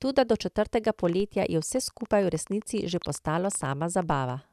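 From 0.99 s to 4.31 s, just after "do četrtega", a train of clicks runs at about 8.8 per second with an irregular pace, roughly thirty in all and about as loud as the speech. Its near-identical shapes keep ticking through the pauses, which points likely to interference or a faulty connection. At 1.20 s, also just after "do četrtega", a DC step shifts the waveform's zero line. It is heard as a single low thump, and the offset then drains away at roughly a 5 Hz high-pass rate. From 3.04 s to 3.05 s a corrupt frame was decoded, about two frames' worth. Misread data puts energy at the wrong frequencies, heard as a brief glitch peaking near -25 dBFS. At 4.11 s a second DC step gives another low thump with the same slow decay.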